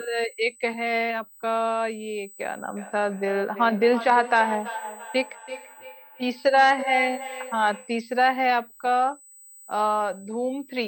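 From start to finish a USB whine sits at a fixed 8 kHz, roughly 25 dB below the speech. Current drawn in the bus's 125-microsecond microframes leaks into the audio through power or ground. It shows as a steady horizontal line on a spectrogram and is heard as a thin, constant high-pitched whistle.

From 2.77 s to 8.05 s there is feedback echo between two devices. A second device in the room replays this microphone's sound, and the microphone picks it up again. Each syllable returns about a third of a second later, thinner and more ringing, peaking about 11 dB below the speech. On the waveform, fainter copies of each burst trail it at regular intervals.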